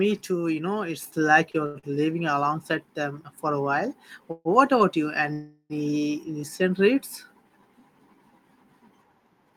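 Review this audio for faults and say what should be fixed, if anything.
Microphone volume stepped up at 1.02 s: the speech and the background noise jump together by about 4 dB in a single step, as the call software raised the microphone's input level. Set the input level correctly beforehand and disable automatic microphone adjustment.

Short stall from a late packet at 1.51, 1.66 and 1.79 s: the sound is held for 25, 89 and 43 ms respectively, each with a slight buzz or dip, then resumes where it stopped with nothing lost. A packet arrived late, the jitter buffer ran dry, and the receiver stretched the last sound until it came. A larger or adaptive jitter buffer would absorb this delay variation.

Call audio freeze at 4.31 s and 5.33 s: the speech stops and the last sound continues as a fading buzz or hiss for about 140 ms and then about 370 ms, with a brief moment of near silence at the end of each. 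The speech then picks up where it left off, so a gap has been inserted rather than content removed. The likely cause is packets held up in the network long enough to empty the jitter buffer. Fixing network congestion or prioritising voice traffic would prevent this.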